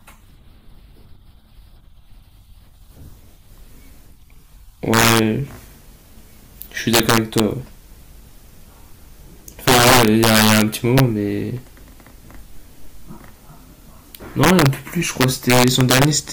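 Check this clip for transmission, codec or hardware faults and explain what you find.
The speech carries integer overflow at 4.94–5.19, 6.94–7.40, 9.68–10.62, 10.98–11.00, 14.44–14.66 and 15.21–16.05 s. Peaks pushed about 1 to 9 dB past full scale wrap to the opposite sign instead of limiting, giving violent cracks far harsher than clipping. On a waveform, peaks jump rail to rail; a spectrogram shows full-band vertical streaks.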